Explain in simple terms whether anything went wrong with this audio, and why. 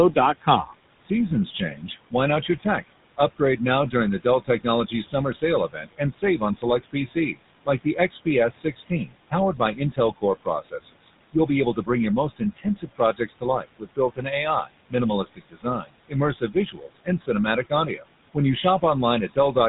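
Noise suppressor artifacts run through the whole clip: a filter keeps pushing down the background room noise, so it dips between phrases and swells under the speech.

GSM full-rate codec damage is also present throughout: this old phone codec rebuilds the voice from a rough model, so it sounds buzzy and gravelly and carries nothing above about 3.8 kHz.

Speech cut by the noise suppressor happens on and off from 0.13 to 19.56 s, about four seconds in total. The filter mistakes soft sounds and word endings for noise, so they come out swallowed or faint.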